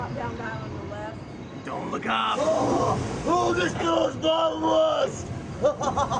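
No technical faults can be heard anywhere in the clip.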